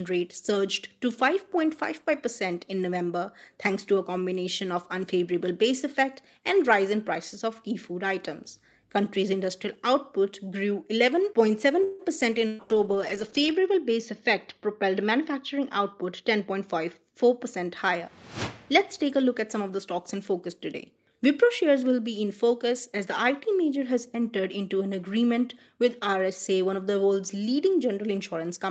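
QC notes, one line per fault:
11.83–12.02 s, call audio freeze: the sound hangs as a fading buzz or hiss for about 155 ms, then carries on with nothing lost, likely packets held up so the jitter buffer ran empty.
12.47–12.62 s, burst of packet loss: about 120 ms of audio is gone, covered by a fading held buzz or hiss, then it jumps ahead past the gap.
12.52–18.73 s, call bitrate drop: Opus falls from 32 to 8 kbps, bottoming out for about 1.1 s, so the sound turns rough, watery or muffled until bits recover.
15.11–16.59 s, jitter buffer speed-up: the buffer trims around 150 ms in tiny pitch-period slices, so the audio runs about 10% fast at unchanged pitch and feels hurried.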